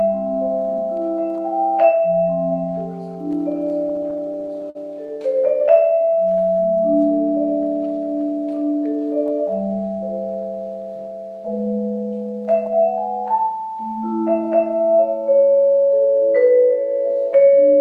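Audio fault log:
3.89–5.18 s repeated stalls (stutter): fourteen holds up to 50 ms stretch the last sound while the buffer starves; unlike dropouts, nothing is lost, it drags.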